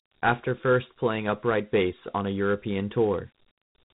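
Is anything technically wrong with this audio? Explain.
Yes. Throughout the speech, the sound is narrow and boxy, with a gritty hiss that rides along with the voice and nothing above about 3.8 kHz. This is Dialogic VOX ADPCM damage. The codec keeps only a 4-bit step from each sample to the next, with an adaptive step size, so fine detail turns to granular noise that follows the signal. The band limit and plainly audible grit fit 4-bit samples at 8,000 a second, or 32 kbps.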